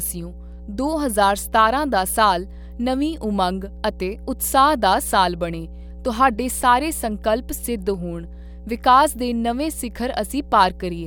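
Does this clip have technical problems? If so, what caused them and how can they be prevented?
Yes. A mains hum at 60 Hz runs under the speech from start to finish, sitting fairly high, roughly 15 dB below the talking. Power-line current is reaching the signal path, likely through a ground loop or a transformer near the cabling, and adding a constant low tone with a few low harmonics. On a spectrogram it appears as a thin horizontal line at 60 Hz, with fainter lines stacked above it, that persists through pauses. In the waveform, the quiet gaps show a steady periodic ripple instead of flat silence. Prevention: power all equipment from one grounded outlet, use balanced cables or a ground-lift isolator, and keep audio lines away from transformers and power supplies.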